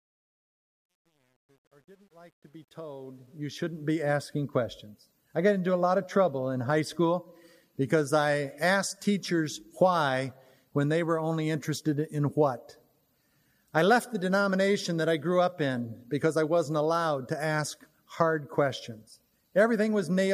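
From 0.0 to 3.92 s the fade-in shows truncation distortion, worst before 2.94 s: undithered rounding, consistent with about 10 bits, turns the quiet waveform into square steps. It sounds gritty, with broadband specks on a spectrogram.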